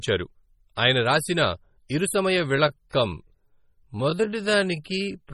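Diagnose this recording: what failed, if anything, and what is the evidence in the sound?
Heavy MP3 compression damage runs through the whole speech clip and most likely comes from the codec stage. The sound is watery and swirly from start to finish, as weak frequency lines drop in and out between frames, which fits a low bitrate of about 32 kbps. Nothing extends above about 20.5 kHz, so the fixed treble cut sits high. That points to bit starvation across the band rather than a narrow bandwidth limit, which separates it from plain low-pass filtering.

A time-stretched section starts at 2.34 s and runs to the end. The pace drops abruptly to about 0.65 times normal speed, so the speech drags, but the pitch stays where it was. That rules out a tape or clock slowdown, which would lower the pitch along with the pace. The likely cause is processing software that lengthened this part to fit a duration, holding pitch by repeating short pieces of the signal.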